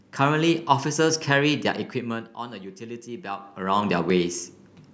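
At 4.10 s the speech jumps. This is a dropped buffer (overrun). The likely cause is that the recording program did not read its samples in time, and the hardware wrote over them. Only a few milliseconds are gone. There is no gap of silence. The audio on each side is joined directly, so the waveform steps abruptly. The missing samples make the slight skip forward in the sound.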